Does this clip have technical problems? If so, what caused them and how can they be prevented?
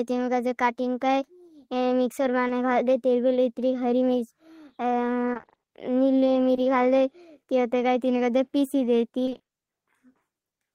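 Yes. At 2.47–2.51 s and 6.55–6.59 s, just before "घाल दे", there is a brief smear in the speech: short concealed packet loss. About 20 ms of audio arrived too late each time, and the decoder bridged the hole by extending the preceding sound. A larger jitter buffer and forward error correction would prevent it.

From 5.33 to 5.69 s, and from 9.25 to 9.49 s right after "ह कातिल का पीसी", the speech turns choppy and robotic. This is repeated packet loss: gaps of up to 20 ms each follow one another, so about half of each stretch is patched audio. A steadier network path with redundancy or retransmission would prevent it.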